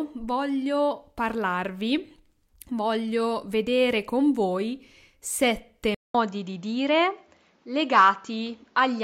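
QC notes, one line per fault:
5.95 to 9.03 s, input switched to a poorer device: after a gap of about 200 ms the sound continues with nothing above 7.6 kHz, a different tone, and a new background noise about 40 dB under the signal, while loudness stays about the same. The likely cause is the recording moving to a narrower-band microphone or headset profile. The brief dropout and the changed noise floor distinguish it from a plain low-pass filter or a codec bandwidth drop.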